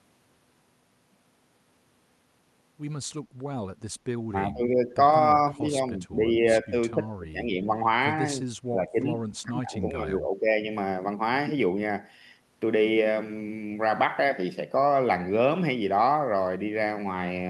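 Speech with five stretches where the level dips: 4.28 to 4.99 s, 5.52 to 6.45 s, 6.62 to 7.82 s, 8.68 to 8.99 s and 9.4 to 10.52 s, falling by about 10 dB at first and by about 15 to 20 dB at the last two. The likely cause is speech suppressed in double talk, with an echo canceller ducking the talker while the far side spoke. A waveform shows the envelope pinched down in these windows, and a spectrogram shows darker, thinner bands there.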